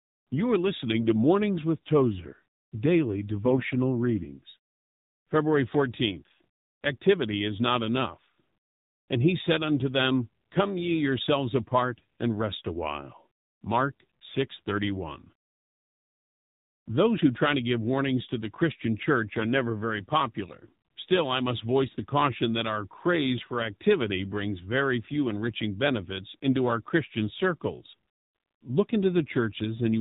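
All the way through, the speech has AMR narrowband mobile codec damage: nothing above 4 kHz, and a buzzy, synthetic tone that fits a low mode near 7.4 kbps. AMR bit errors hit at 3.43–3.64 s and 19.32–19.46 s, just before "never very popular". Flipped bits in the weakly protected part of each frame misplace the pulses, so pitch and level hold but the voice turns scratchy and gargly.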